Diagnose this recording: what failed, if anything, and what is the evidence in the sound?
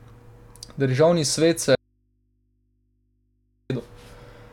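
Audio dropout to a faint residue, likely an open analogue input: speech cuts abruptly from 1.75 to 3.70 s, leaving only faint mains hum.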